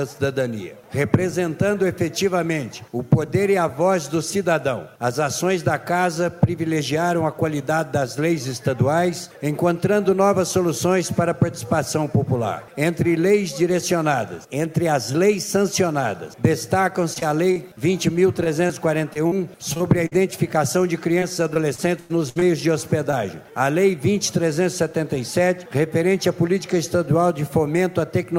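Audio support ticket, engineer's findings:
Brief smears at 17.13 s, 17.20 s, 17.52 s and 23.11 s, each a short wobble where the sound momentarily blurs. Short concealed packet loss in the receive path. About 20 ms of audio went missing at each point except 17.52 s, where about 40 ms was lost. The decoder patched each hole by extending the preceding sound, then cross-faded back to real audio.

Choppy, robotic stretches from 18.44 to 20.13 s and from 21.19 to 22.43 s, with fragments dropping out in quick succession. Repeated packet loss in the network or jitter buffer. Concealment covers about 11% of the first stretch, with holes up to 41 ms, and about 19% of the second, with one hole reaching 96 ms. Each patch is followed soon after by the next hole.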